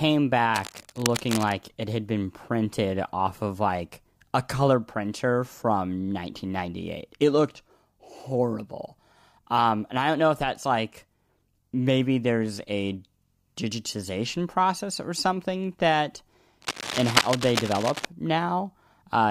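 Cable scratch noise appears from 0.54 to 1.52 s, just before "it had been printed", and again from 16.62 to 18.05 s, after "process or something that". A worn cable or connector likely shifting makes rough, crackling rustle, roughly 10 dB then 5 dB below the speech. It shows as dense broadband speckle on a spectrogram and jagged spikes in the waveform.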